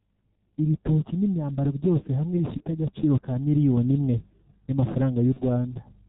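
The whole speech clip carries the sound of the G.723.1 codec, with heavy damage. Nothing above 4 kHz survives. The voice is muffled and hoarse, and consonants smear into each other. The coder works in 30 ms frames and updates its model of the voice slowly, so quick changes blur. The muffled, hoarse quality fits the low 6.3 kbit/s rate of this codec.

At 2.58 to 2.63 s, right after "ibitoki n’imyambaro byose hamwe" and before "agaciro ka miliyoni imwe", comes VoIP packet loss concealed by the speech codec. About 30 ms of audio is missing, which points to one lost frame. The decoder fills the gap by repeating its last pitch and filter at falling gain. The result is a brief stretched, fading sound, and the voice stays weak for a moment after. The same thing happens at 5.34 to 5.42 s, again covering about 30 ms.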